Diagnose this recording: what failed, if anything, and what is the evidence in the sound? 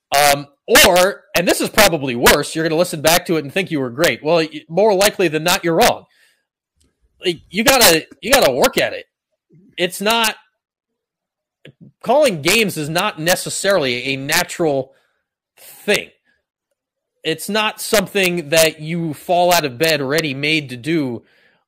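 Integer overflow in the sample-format conversion stage, present across the whole speech clip. The signal was pushed about 6 dB past the integer limit. Instead of being clamped, the loudest peaks wrapped to the opposite sign, producing sharp cracks on a small fraction of samples, around half a percent. On a waveform these appear as peaks that jump abruptly across the full range. On a spectrogram they show as thin broadband vertical lines at the loudest moments.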